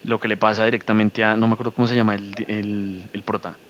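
A faint, delayed copy of the speech trails the voice by about 222 ms in short scraps at 0.00–0.21 s, 0.82–0.86 s and 1.72–1.76 s, barely audible. It returns more clearly at 2.27–2.48 s and lingers, quieter, from 2.86 s to the end. This is echo leak, likely from a far-end loudspeaker whose echo canceller let part of the microphone pickup slip back into the call.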